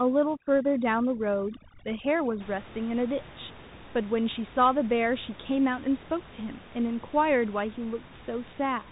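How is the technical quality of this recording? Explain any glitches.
Technical quality is poor, with band-limited, distorted sound throughout and an over-processed opening; the room noise sits about 20 dB below the speech.

The Bluetooth CVSD headset codec affects the whole clip. Its one-bit slope coding at 64 kbps passes speech below 3.8 kHz but cuts everything above it. This leaves scratchy sibilants and granular hiss, and a spectrogram shows a hard ceiling at 3.8 kHz.

Overdone noise removal runs from 0.0 to 2.40 s. Bands near the noise estimate are gated out, leaving near-silent gaps with twinkling specks; a spectrogram shows scattered isolated dots.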